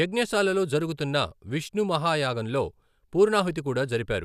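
Nothing in this bit of speech stands out as a technical fault, so there's nothing to flag here.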